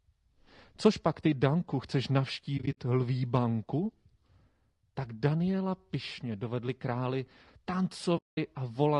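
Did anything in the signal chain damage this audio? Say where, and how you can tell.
Yes. Throughout, the speech sounds rough and grainy with noise between harmonics, likely from low-delay AAC compression in the codec stage, consistent with a low bitrate around 32 kbps.

At the network stage, AAC frame loss with muting leaves soft-edged holes: scattered gaps from 2.57 to 2.78 s, just before "lví banku", and a solid 8.17 to 8.38 s dropout where zeroed frames fade out and in.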